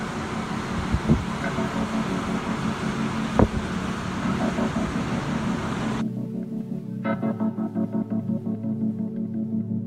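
No technical faults are audible.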